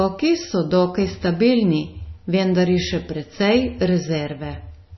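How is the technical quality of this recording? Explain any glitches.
Heavily degraded throughout: the speech has no treble above about 5.9 kHz, sounds dull and watery, with swirling, chirpy s sounds and smeared attacks. The likely cause is MP3 compression at a low bitrate, around 24 kbps, cutting the highs and switching weak frequency components on and off between frames.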